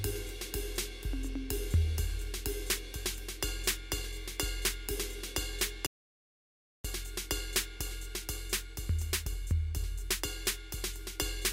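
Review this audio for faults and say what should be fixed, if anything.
At 5.86 s the music stops dead mid-flow and falls into silence, with no room tone or decay underneath, before cutting straight back in at 6.85 s. That is an audio dropout to silence lasting just under a second, about 0.98 s, and whatever was playing in that stretch is simply missing. The cause is likely a momentary loss of the input signal, such as a loose connection, a failing link or an accidental mute, while the recorder kept writing silence. To prevent it, secure and test cabling and interfaces before recording and monitor input levels live so any loss is caught and retaken.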